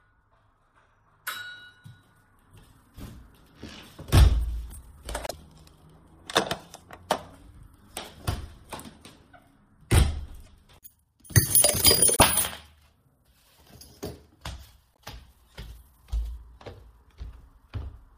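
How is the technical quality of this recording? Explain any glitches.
The recording has two kinds of fault: brief glitches in the middle and a muffled ending.

At 5.27 to 5.33 s, 10.44 to 10.48 s, 12.16 to 12.22 s and 14.93 s, the sound skips forward with a short chirp or noisy hole. This is likely a broken MP3 bit reservoir: frames about 26 ms long were lost, and the following frames read borrowed data from the wrong place.

From 16.37 s to the end, the audio turns dull and muffled. De-emphasis was applied wrongly, cutting the treble smoothly to about 8 dB down at 10 kHz relative to 1 kHz.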